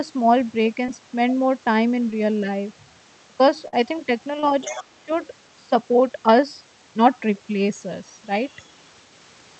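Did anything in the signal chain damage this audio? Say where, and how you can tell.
Yes. The damage is in the network stage, where short concealed packet loss occurs three times: 0.85 to 0.89 s, 2.11 to 2.13 s, and 4.40 to 4.44 s. In each, a few tens of milliseconds of audio arrived too late for the decoder. The receiver bridged the hole by extending the preceding sound, then crossfaded back into real audio. You hear it as a brief smear or wobble, and a quick consonant can drop out entirely.

A burst of packet loss, also in the network stage, hits from 3.68 to 3.74 s. This is a longer gap, roughly 47 ms, and about 40 ms of real audio never arrives. Concealment stretches the last sound across the gap while pulling its level down. A voiced sound turns into a held buzz and anything else into a fading hiss. When playback resumes, it jumps ahead, with the in-between audio gone.

The other side's voice leaking through appears in the call-processing stage, from 4.62 to 4.84 s. 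A second voice sits about 15 dB under the talker. The likely cause is the talker's device playing the other side from a loudspeaker, with the echo canceller failing to subtract all of it from the microphone feed.

Speech suppressed in double talk is also a call-processing fault, from 4.66 to 5.10 s, overlapping the leak. The talker's level dips by roughly 15 dB at its deepest and is affected over about 300 ms in total. The likely cause is that, with both sides active, the echo canceller could not tell the near talker from loudspeaker echo and attenuated everything. The result is a dipping stretch. This all rides on an Opus call path whose bandwidth tops out at 8 kHz.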